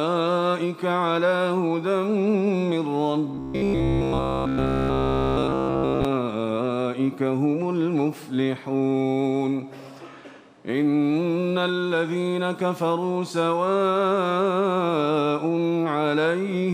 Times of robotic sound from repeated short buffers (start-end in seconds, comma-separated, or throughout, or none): 3.35-6.05